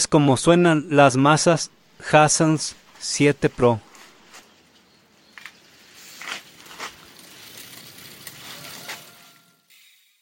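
Nothing stood out on listening, apart from the level easing down smoothly over the last second or so as an ordinary edited fade-out.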